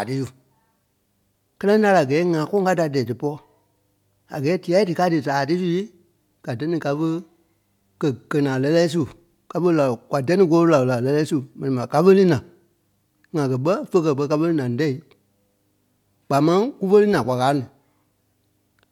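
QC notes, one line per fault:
No fault to note.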